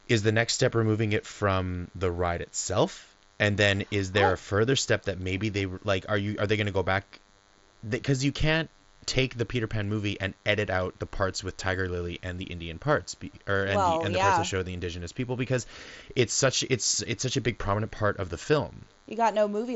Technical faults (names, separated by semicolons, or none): DECT cordless phone buzz